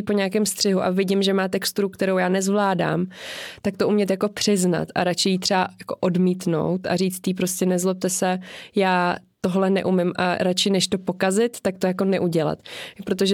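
Listening to this speech recording, nothing technical stood out at any point.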